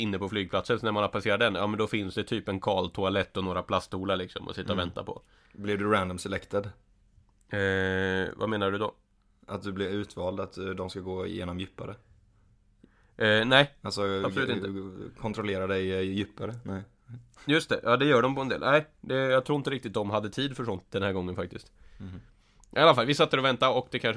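A recording of speech with no technical fault to report. There are no times or causes to give.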